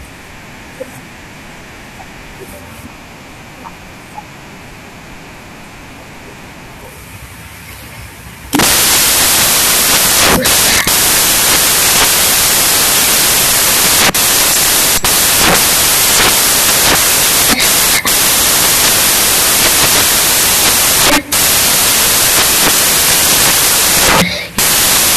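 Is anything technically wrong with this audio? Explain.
Yes. Throughout, the samples are built from the wrong bytes: the reader misassembles each value, so the jittery low bits dominate. That produces loud, harsh broadband noise.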